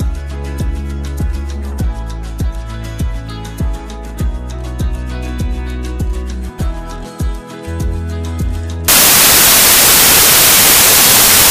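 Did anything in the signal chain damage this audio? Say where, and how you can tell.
Yes. At 8.88 s the sound collapses into loud, harsh broadband noise that runs to the end at 11.51 s. That points to samples built from the wrong bytes at the sample-format conversion stage, where misaligned or swapped bytes push the rapidly changing low bits into the high-order part of every value.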